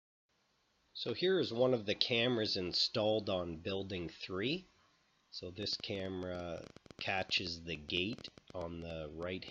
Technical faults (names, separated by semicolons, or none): train of clicks